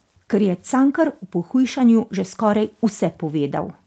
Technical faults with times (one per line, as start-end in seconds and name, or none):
none